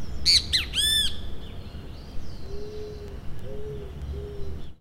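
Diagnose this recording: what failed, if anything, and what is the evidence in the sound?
Sharp, uneven ticks recur roughly every 0.3 s from 0.28 to 4.64 s: word clock ticks, an unlocked digital-link receiver slipping one sample as clocks drift tens of ppm apart.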